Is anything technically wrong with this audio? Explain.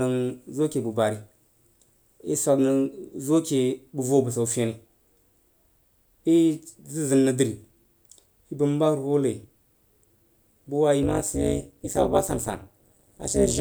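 Yes. From 11.03 s to the end at 13.61 s, the speech carries overlap-add ripple. It was split into windowed frames and rejoined with an overlap whose gains don't sum flat, so the level swings by about 60 dB once per frame, at around 200 Hz. It sounds like a harsh metallic buzz with extra tones around each note. The waveform's envelope collapses almost to silence every few milliseconds, and a spectrogram shows dense, evenly spaced vertical stripes.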